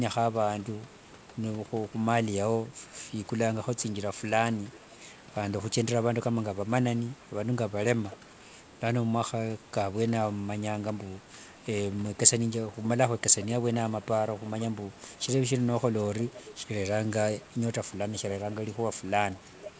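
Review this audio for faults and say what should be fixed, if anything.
Echo leak is audible eight times: 4.72–4.79 s, 8.09–8.17 s, 13.4–13.74 s, 14.37–15.2 s, 15.99–16.51 s, 17.09–17.44 s, 18.4–18.77 s, and 19.38 s to the end. A faint delayed copy of the speech trails the original by about half a second, stretching from 492 to 509 ms. It sits roughly 15 to 30 dB below the speech. The likely cause is a far-end loudspeaker whose echo canceller let part of the returned signal through. To prevent it, use a headset at the far end or tune its echo canceller.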